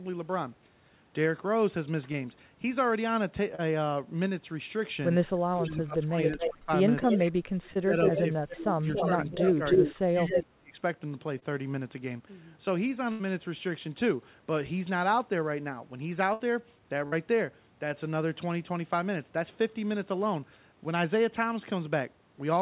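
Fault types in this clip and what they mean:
short concealed packet loss: brief smears or wobbles at 2.12, 3.55, 7.74, 11.39 and 17.08 s, where 20 to 40 ms of missing speech was filled by continuing the previous sound.
speech suppressed in double talk: the speech dips in patches between 5.5 and 10.8 s, by up to about 35 dB, likely an echo canceller turning down overlapping talkers.
echo leak: a delayed copy of the speech trails about 0.28 s behind, in scraps and then in a long stretch from 8.49 to 10.43 s, likely loudspeaker echo the canceller let through.
burst of packet loss: a held buzz or fading hiss at 13.12 and 16.33 s, where 80 and 60 ms of audio were lost and replaced by a decaying continuation.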